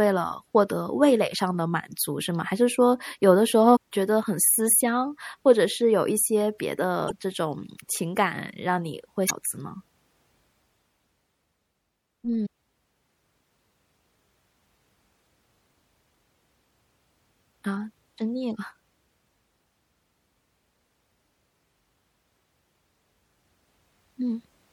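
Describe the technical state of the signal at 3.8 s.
At 3.75 to 3.77 s there is damaged data in the compressed stream: the decoder misreads corrupted frames, loses sync and hunts for the next header, producing a brief disruption. On a spectrogram it shows as a broadband smear; the waveform shows a short discontinuity.

Throughout the speech, including this moment, watery, swirly MP3 compression damage is plainly audible, likely from encoding at a low bitrate that fits about 64 kbps. A spectrogram shows flickering holes in the upper bands.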